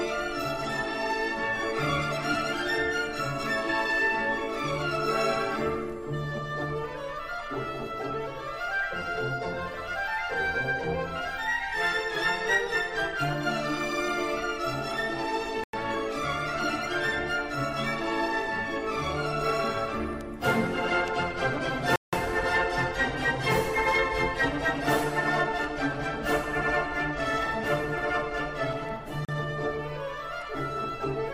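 The audio drops to silence three times: at 15.64 s for about 97 ms, at 21.96 s for about 169 ms, and at 29.25 s for about 36 ms. Then it resumes. This is likely a Bluetooth stall. Radio interference delays packets, the headphone buffer empties, and playback waits.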